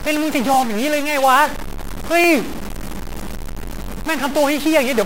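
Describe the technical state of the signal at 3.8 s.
At 3.84 to 3.86 s there is a repeated buffer. New audio arrived late, so a 20 ms block of speech played once more. The hard joins at each end make a short click, almost a brief buzz, with no audio lost.

Under that, the whole signal carries distortion, and the pauses fill with noise. This is likely a stuck bit, where one data bit stays fixed. That puts many sample values off by that bit's weight.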